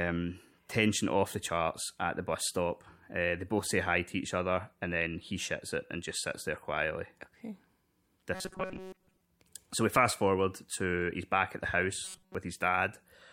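The speech turns robotic twice, from 8.35 to 9.21 s and from 12.04 to 12.35 s, with a rigid metallic buzz near 188 Hz that only loosely tracks the speech. That pattern is likely due to repeated short buffers: a segment of about 5.3 ms is replayed whenever fresh audio arrives too late, for most of each stretch. A spectrogram shows evenly spaced harmonics of 188 Hz, and the waveform shows identical short cycles repeating.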